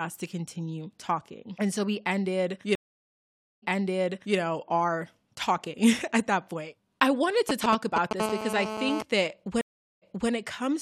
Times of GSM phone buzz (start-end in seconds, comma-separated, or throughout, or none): 8.20-9.03